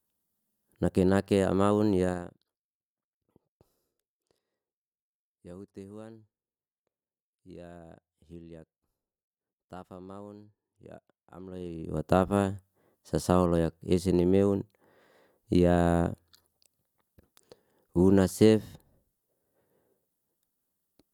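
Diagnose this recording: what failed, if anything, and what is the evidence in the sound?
Zipper noise appears between 11.42 and 12.03 s, where a gain change of about 20 dB is applied in steps of about 2 dB at around twenty steps a second. Each jump produces a small click, so a rapid ticking rides on the speech while the level moves. This points to gain processing at the driver or buffer stage updating once per block without interpolation.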